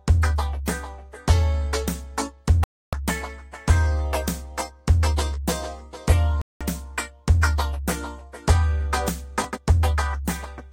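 Digital broadcast dropout at 2.64–2.93 s and 6.42–6.61 s interrupts this recording of sounds: the receiver stops getting valid frames and mutes, leaving holes of about 290 ms and 190 ms before the sound resumes, with that material gone. Chunks out of order at 9.42–9.45 s produce a brief jumbled moment: a 5.8 ms chunk arrives three chunks late and plays after audio that should follow it, so nothing is missing but the sequence is scrambled across three hard joins.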